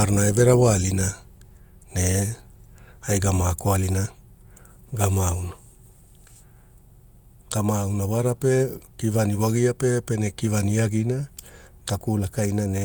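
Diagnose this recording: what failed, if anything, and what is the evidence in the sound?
Nothing stood out on listening to this recording, and no stage of the chain gives away a failure anywhere in the speech.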